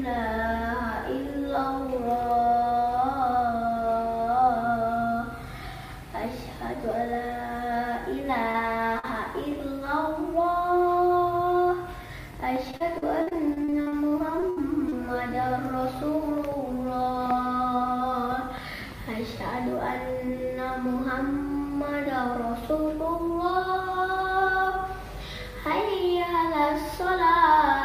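At 8.51 to 8.56 s there is a short concealed packet loss. About 20 ms of audio never arrived in time. The receiver patched the hole by extending the preceding sound, then blended back in, and a sliver of real audio is dropped. A second one follows at 8.99 to 9.05 s, with about 40 ms missing. Each is heard as a brief smear or wobble.

From 12.71 to 14.94 s there is repeated packet loss with a robotic sound. Packets keep going missing, in 15 separate gaps. The longest gap is 67 ms. About half a second is missing in total, so roughly a fifth of the stretch is concealed. Each gap is filled by continuing the last sound, and the next gap comes soon after. The result is choppy, with pieces missing.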